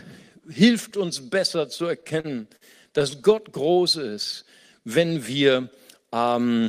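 From 1.77 to 2.63 s the speech stutters: repeated stalls. Late packets left the jitter buffer empty seven times. Each time the receiver stretched the last sound to cover the wait. About 138 ms was filled this way. The longest hold was 52 ms. Nothing is lost, but the flow drags and catches. A milder stutter follows from 2.99 to 3.33 s. There are four brief holds, none over 13 ms, filling about 38 ms.

From 3.66 to 4.16 s comes a jitter buffer slow-down. The buffer was refilling its reserve. It did this by repeating single pitch cycles many times over. That added 62 ms, so the speech runs at 89% speed. The pitch stays the same. Sounds come out drawn out.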